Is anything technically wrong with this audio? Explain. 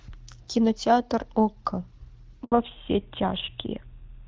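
Yes, there are two faults, both in the second half of the speech.

Handover gap, 2.44 to 2.52 s: the call was passed from one network to another, and no speech frames arrived during the switch. The voice fades out within a few tens of milliseconds and stays silent for about 80 ms until the new link starts carrying audio. Whatever was spoken in that window is lost.

Fallback to narrowband, from 2.52 s to the end: after the handover the call no longer uses HD Voice but an older narrowband codec. Before the gap, the wideband sound fits AMR-WB at around 12.65 kbit/s, with only light coding damage and presence up toward 7 kHz. After it, nothing above 4 kHz remains, which fits GSM full rate at 13 kbit/s. The voice sounds duller and boxier, with a rougher texture.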